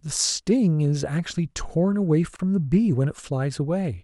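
At 2.36 s the speech drops out for 32.5 ms, until 2.39 s. This is a gap at a join of encoded pieces. The audio was encoded in separate chunks, which fits pieces about 4 s long, and the chunks were joined without trimming. The encoder's start-up delay and the padding in the last frame both stayed in as silence. The gap's edges are smeared by the codec. The speech then resumes exactly where it stopped.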